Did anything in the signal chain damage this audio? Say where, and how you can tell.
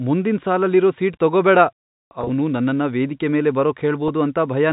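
Yes. Network packet loss with pitch repetition occurs at 2.21–2.29 s, just before "ನನ್ನನ್ನ ವೇದಿಕೆ ಮೇಲೆ", and at 4.08 s, just after it. The gaps are filled with repeated pitch cycles, which show as identical copied waveform periods.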